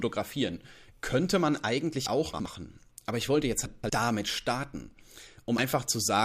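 At 2.06 s, damaged data in the compressed stream makes the decoder lose frame sync and search for the next frame header. From 2.34 to 2.46 s, chunks out of order put a 60 ms block one chunk late, so the audio briefly jumbles. From 3.66 to 3.90 s, between "ich wollte jetzt" and "damit starten", another 60 ms chunk plays three chunks late, garbling that moment. At 5.58 s, a second patch of corrupted data makes the decoder lose sync again.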